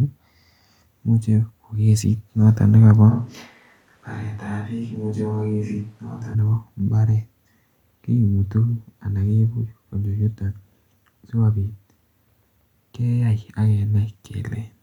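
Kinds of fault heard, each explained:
Switch to a distant microphone: the close microphone's feed likely dropped out, leaving a far-off pickup from 3.12 to 6.33 s. The speech abruptly turns roomy and hollow, falls by about 10 dB, and room noise surfaces beneath it, until the close sound snaps back.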